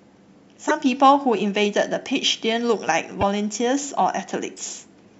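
A corrupt frame decoded at 0.68 to 0.71 s, again at 3.21 to 3.23 s: damaged bits in the compressed speech were played anyway, misplacing energy in frequency. Each is a brief loud glitch peaking around -5 dBFS, the first suggesting one frame hit, the second about two.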